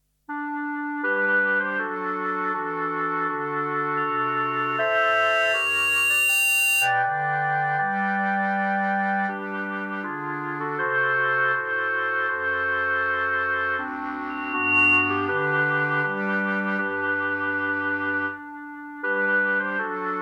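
At 3.97 s a loudspeaker feedback squeal begins. A microphone is picking up the loudspeaker it feeds, and the loop gain passes one at a single frequency. A pure tone near 2.8 kHz swells over roughly two seconds, ending up about 5 dB above the sound, and stops at 7.03 s. It returns from 14.29 s to 15.45 s at the same pitch. This time it builds faster, in about half a second.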